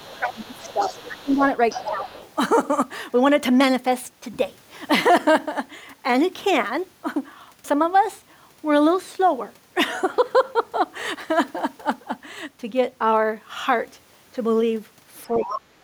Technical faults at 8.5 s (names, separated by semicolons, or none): none